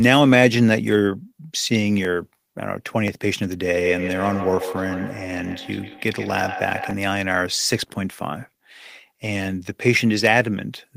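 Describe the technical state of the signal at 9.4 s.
At 9.4 s the speech signal is intact, with no audible technical fault at that moment.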